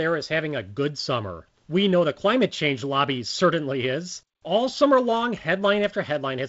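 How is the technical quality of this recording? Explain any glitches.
No glitches turn up anywhere in the recording, and the speech comes across as G.722 wideband telephone coding would give it, with nothing above about 7.7 kHz and just a light, easygoing hiss in the upper band.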